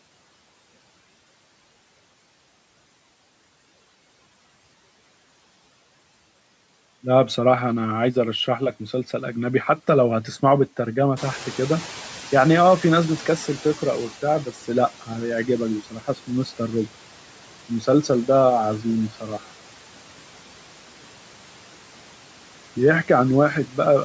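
Throughout the recording there are noise suppressor artifacts. The suppressor pulls down the bands it judges to be steady noise by about 12 dB, frame by frame, so the background dips in the gaps and swells under the speech.

At about 11 s the room noise jumps by about 14 dB. From 11.16 to 14.17 s the noise suppressor is catching up. Its noise estimate trails the new level, so the louder background first comes through with little reduction. Over those 3.01 s it sinks by about 10 dB as the estimate settles, ending roughly 19 dB below the speech.

Speech is cut by the noise suppressor twice: from 15.91 to 16.29 s, with a drop of about 11 dB, and from 19.1 to 19.4 s, with a drop of about 8 dB. Each time, the suppressor mistakes around a tenth of a second of speech for background and turns it down, so those fragments sound swallowed and faint.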